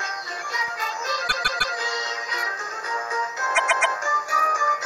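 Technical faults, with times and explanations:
1.27–1.74 s and 3.54–3.93 s, repeated frames: a short block, about 157 ms and then 131 ms, plays three extra times, so you hear a stutter. Those block lengths fit roughly six and five compressed frames being resent, adding about 0.47 s and 0.39 s.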